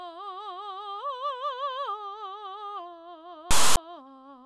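At 3.51 s the music breaks into a harsh, lopsided rasp that stops dead into silence by 3.77 s: file tags played as audio, their text and zero padding decoded as samples.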